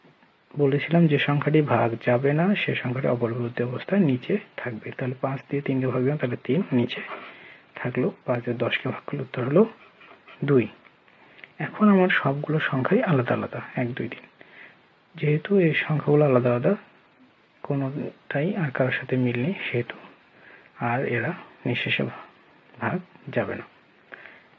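No technical fault is audible in the signal, which carries the normal character of call microphone processing, with the lowest bass trimmed by its high-pass filter and nothing present above 8 kHz.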